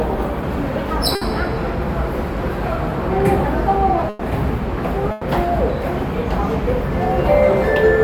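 Three bursts of packet loss, at 1.15 s, 4.09 s and 5.11 s. Each hides missing audio (60, 120, 120 ms) under a fading continuation of the last sound, then jumps ahead.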